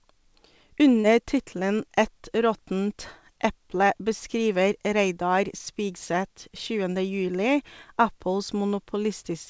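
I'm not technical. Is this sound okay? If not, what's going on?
No. Around 1.01 to 1.07 seconds there's a brief smear or wobble in the speech. This is short concealed packet loss: about 30 milliseconds of the call arrived too late, so the receiver patched the gap by stretching the preceding sound.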